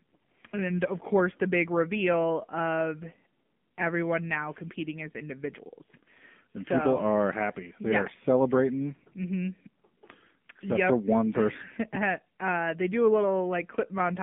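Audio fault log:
throughout: AMR narrowband mobile codec. The speech is confined to a 150 Hz to 3.4 kHz line band, and a buzzy, synthetic, clearly coded texture fits a low AMR-NB rate near 7.4 kbps. A spectrogram shows an empty region above 3.4 kHz and a thinned floor below 150 Hz.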